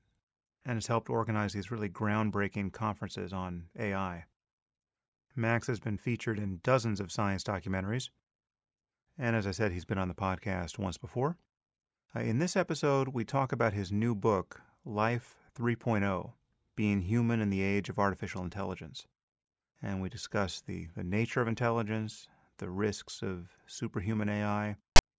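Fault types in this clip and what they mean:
File tags played as audio: right at the tail, from 24.96 to 24.99 s, a block of text metadata gets read out as if it were samples, so you hear a hard-edged, lopsided rasp for about 30 ms, a short loud burst of static.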